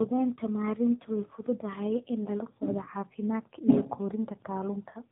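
From start to finish the speech shows tandem speech coding. The roughness, muffling and warble point to two passes through an AMR-NB coder near 10 kbit/s, linked by a G.711 stage, each coder re-encoding the previous one's already damaged output. On a spectrogram, energy stops flat at 3.8 kHz, and harmonics look smeared and ragged rather than clean stripes. The waveform envelope looks grainy, matching the doubled coding noise.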